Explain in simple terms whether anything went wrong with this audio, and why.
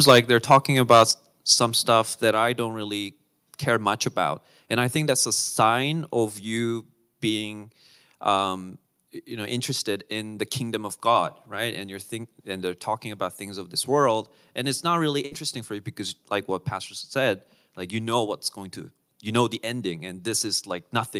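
Several things went wrong. At the very start, the loudest moments crackle harshly, from 0.07 to 0.19 s, 0.51 to 0.58 s and 0.90 to 1.03 s, just before "some stuff that I". This is microphone overload. The likely cause is a microphone set too loud, so the tops of the peaks get chopped off.

During or right after some of those crackles, the level suddenly drops, at 0.11 s and again at 1.11 s, before "some stuff that I". This is the microphone volume being stepped down. The call software likely turned the input down to stop the distortion.

Around 15.25 to 15.34 s, between "and it's not really" and "for you because like", there is a burst of packet loss. Some audio was lost or came too late. The receiver stretched the last sound for about 58 ms to cover the gap. About 60 ms of the original audio is simply missing.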